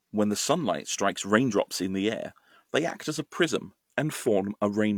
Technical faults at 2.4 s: none

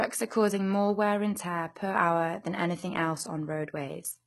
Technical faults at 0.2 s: HE-AAC compression

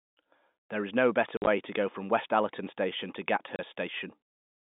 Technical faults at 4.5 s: none

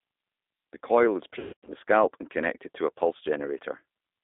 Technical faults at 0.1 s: G.729 codec

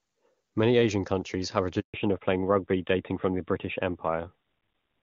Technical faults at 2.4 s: fallback to narrowband

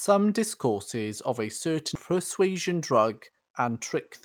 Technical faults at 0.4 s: none

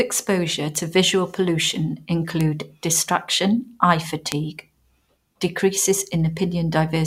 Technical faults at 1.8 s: none

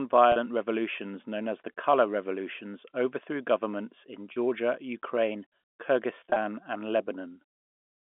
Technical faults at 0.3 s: packet loss with pitch repetition

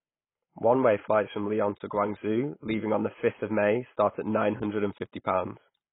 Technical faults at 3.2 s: AAC compression

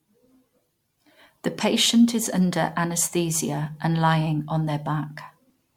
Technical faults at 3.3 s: generation loss

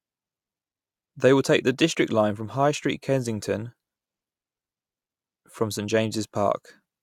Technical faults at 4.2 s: none

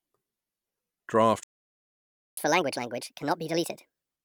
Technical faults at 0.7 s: none

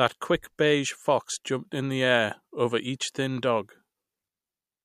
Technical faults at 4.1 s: none

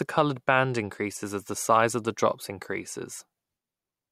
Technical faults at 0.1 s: none

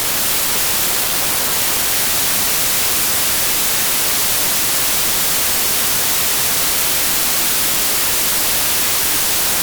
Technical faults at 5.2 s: wrong sample width

